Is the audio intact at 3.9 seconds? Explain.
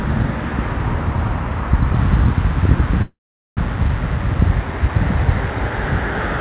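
No. A jitter buffer speed-up runs from 3.69 to 5.34 s. The receiver's buffer held more audio than its target, so it trimmed short slices of one or a few pitch periods again and again, removing around 150 ms in total. Through this span the sound plays about 8% fast at an unchanged pitch, giving a hurried, compressed feel. The call path's band limit, with nothing above 4 kHz, fits a G.711 A-law codec.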